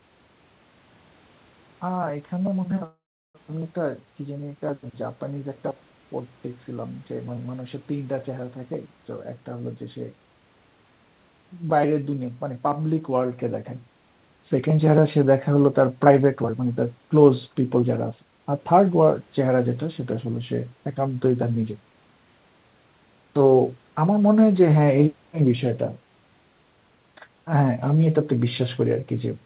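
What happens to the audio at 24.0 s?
Nothing goes wrong at 24.0 s; the speech there comes through intact, with no dropout, glitch or distortion.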